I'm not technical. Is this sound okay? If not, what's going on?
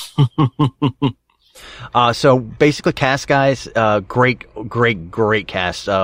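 Yes, this sound is okay, with nothing going wrong in it.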